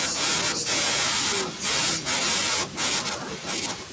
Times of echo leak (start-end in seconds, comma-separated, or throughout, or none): 1.44-1.65, 1.97-2.06, 3.03-3.93